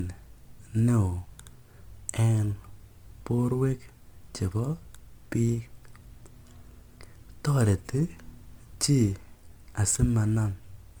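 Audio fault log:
throughout, generation loss: the speech has a swirling, smeared, hollow quality, and consonant attacks are blurred rather than crisp, even though content reaches up to about 20.1 kHz. This is likely from repeated MP3 decoding and re-encoding, around seven passes at a rate that fits 128 kbit/s. Each pass requantises on a shifted frame grid, so quantisation noise and spectral holes accumulate, making the sound more smeared and hollow than one encode at that rate would.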